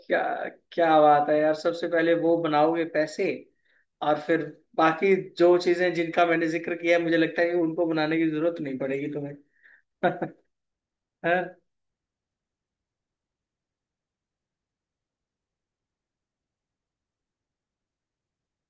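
No technical faults can be heard anywhere in the speech recording.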